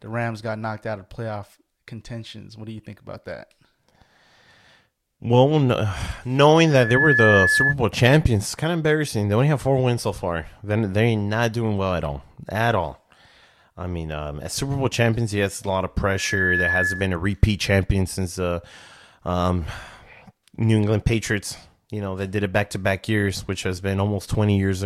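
Speech with loudspeaker feedback squeal at 6.66–7.75 s, before "champions it's kind of", and 16.07–17.20 s, between "yes a lot of" and "repeat champion since the". The microphone-speaker loop exceeds unity gain at 1.7 kHz, so a tone swells within a few tenths of a second. On a spectrogram it is a bright horizontal line, and on the waveform a swelling bulge, the first somewhat louder than the speech.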